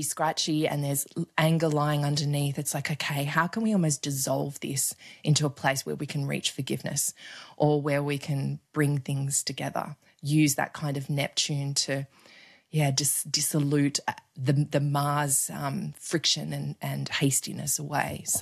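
No technical faults can be heard anywhere in the recording. Nothing interrupts or disturbs the speech at any point.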